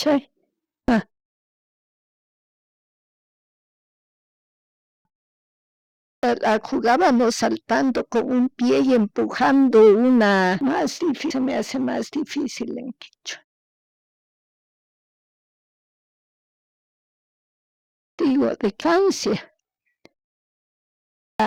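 Five times the speech comes back out of a pause with its opening missing, a clipped start after a pause each time. The output seems to drop into a sleep state during silence and take a while to wake, so the first 0.58 to 0.64 s of sound just isn't there. It happens at 1.79, 4.41, 5.59, 17.61 and 20.76 s, after pauses of 0.76, 2.21, 0.58, 4.25 and 0.7 s. Each time the speech jumps in abruptly from silence, already partway through.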